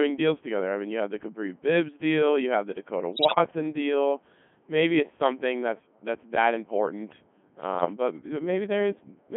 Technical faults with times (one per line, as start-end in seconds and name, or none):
0.00-9.37 Codec 2 vocoder
3.12-3.38 bit errors on digital voice radio
7.74-7.86 bit errors on digital voice radio